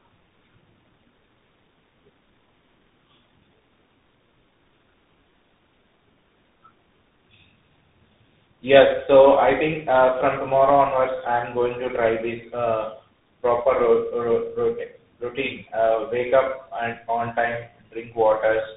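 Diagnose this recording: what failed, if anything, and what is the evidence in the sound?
Tandem speech coding at the codec stage affects the speech throughout, with nothing above 3.8 kHz. The sound suggests a GSM full-rate stage followed by CVSD, with G.711 between them. Each coder re-encodes the previous one's artefacts, compounding roughness and warble beyond what any single narrowband codec would produce.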